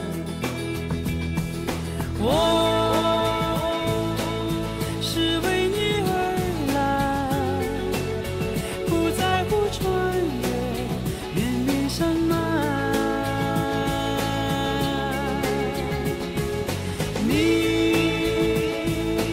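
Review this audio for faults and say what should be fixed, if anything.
Nothing in this audio needs to be fixed, as no faults can be heard.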